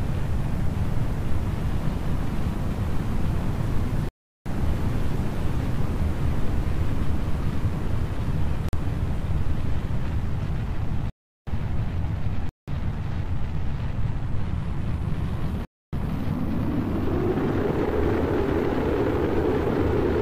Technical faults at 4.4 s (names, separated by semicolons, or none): block of digital silence